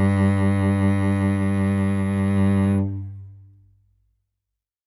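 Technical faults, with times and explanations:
0.00–2.79 s, switching supply whistle: a faint high whistle drifts between 10.86 and 10.97 kHz, roughly 35 dB below the music. A switching power supply cycling in an audible burst mode or beating with another supply, its frequency shifting with load, produces this.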